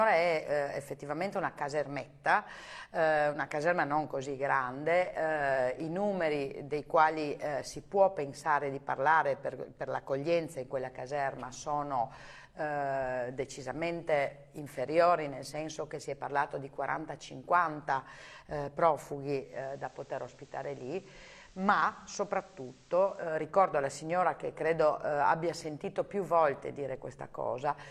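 From 19.36 to 23.40 s the receiver performs a digital radio blend to analogue FM. In a quarter-second cross-fade the level drops about 3 dB, and a hiss floor roughly 30 dB down appears as a flat spectrogram haze.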